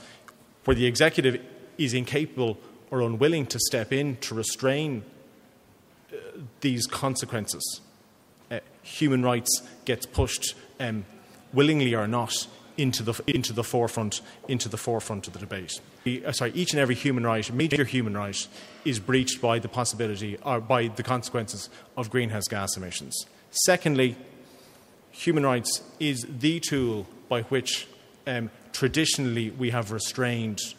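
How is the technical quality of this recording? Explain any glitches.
The recording has two brief glitches of the same kind. Chunks out of order occur at 13.28 to 13.36 s and 17.6 to 17.76 s: a 40 ms chunk arrived late and played after material meant to follow it, one chunk late at 13.28 s and three at 17.6 s. Nothing is missing, but the sequence is scrambled, creating three hard joins at each spot. Each spot sounds like a jumbled moment.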